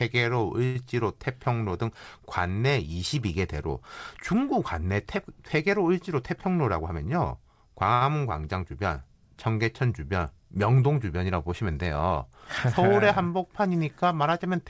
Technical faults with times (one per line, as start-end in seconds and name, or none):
0.65-0.76 call audio freeze
6.23-7.36 jitter buffer speed-up
7.94-8.02 short stall from a late packet